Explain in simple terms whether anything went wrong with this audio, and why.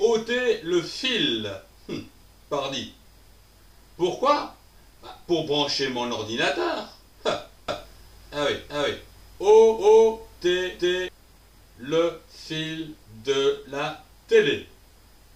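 From 7.68 s to 11.08 s the sound plays twice: a second, equally loud copy trails the original by roughly four tenths of a second. This is a doubled audio track, most likely the same sound being picked up again through a slower route. Unlike a room echo, the copy doesn't fade or sound distant, and it switches on and off abruptly at those two times instead of dying away.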